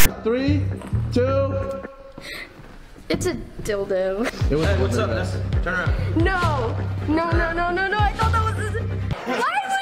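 File tags played as audio occupy the opening 0.06 s, from 0.00 to 0.06 s. A block of metadata at the head of the file has been decoded as if it were sample data. The text portion, whose character bytes sit mostly on one side of zero, comes out as a loud, lopsided rasp, and the zero padding behind it plays as dead silence. Together they form a brief hard-edged burst of static before the real audio begins.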